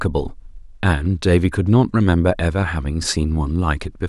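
No technical faults are audible.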